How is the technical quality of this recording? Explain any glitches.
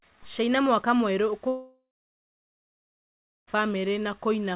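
The recording is narrowband, with nothing above 4 kHz, and a two-second hole breaks the speech midway.

From 1.48 to 3.49 s, a brief fading buzz or hiss gives way to about 1.6 s of silence before speech resumes with a gap. This is likely a long network dropout, with concealment masking the loss only briefly.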